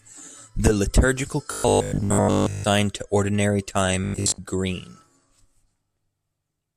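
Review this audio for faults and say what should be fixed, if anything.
The speech turns into a rigid, metallic buzz from 1.52 to 2.64 s and again from 4.04 to 4.40 s, a robotic sound from repeated short buffers. Audio likely arrives too seldom, so playback loops the last 20 ms and skips most of the real signal, forcing a 50 Hz buzz. A spectrogram shows evenly spaced harmonics at multiples of 50 Hz, and the waveform shows the same 20 ms shape repeating. A larger jitter buffer or steadier audio delivery would prevent this.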